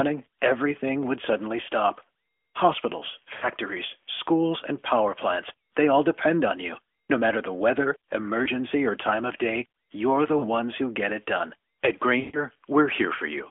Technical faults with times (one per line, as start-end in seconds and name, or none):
0.00-13.50 converter idle tones
3.34-3.48 lost AMR speech frames
8.44-8.48 lost AMR speech frames
10.38-10.49 lost AMR speech frames
12.20-12.46 lost AMR speech frames